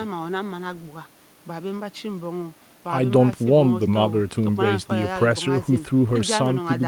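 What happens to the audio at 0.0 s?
Nothing goes wrong at 0.0 s; the audio is intact at that moment.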